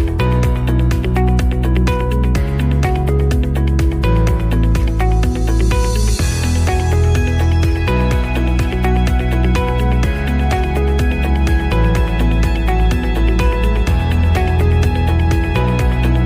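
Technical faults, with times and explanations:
11.1 to 16.3 s, mains hum: from 11.1 s to the end, the 60 Hz power line leaks into the signal, most likely through a ground loop or a transformer near the cabling. It is heard as a steady low drone at 60 Hz with some low harmonics above it. At roughly 10 dB below the wanted sound it is loud, and it does not change.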